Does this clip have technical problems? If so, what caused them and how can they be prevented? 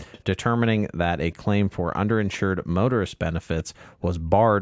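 Yes. Echo leak appears at 0.04–0.2 s, 1.71–1.75 s, 2.32–2.37 s and 3.59–3.64 s. Each is a faint, delayed copy of the speech, lagging by 388 ms and sitting roughly 20 to 35 dB down. The likely cause is a loudspeaker on the far end whose echo canceller let some of its own playback back into the microphone. Using a headset, or lowering speaker volume, prevents it.

The background is also gated by the echo canceller at 0.88–0.92 s, 1.79–1.98 s, 2.53–2.69 s and 3.86–4.3 s. The room sound dips by up to about 40 dB, then returns. The canceller suppressed the microphone while the loudspeaker played. A headset avoids this too, because the canceller then has nothing to suppress.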